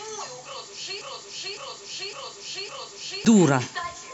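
A broken-record loop runs from 1.02 to 3.25 s: a 558 ms fragment of the speech repeats exactly four times back to back, likely because the player or stream stalled and kept resending its last buffer. The speech that belonged there is lost.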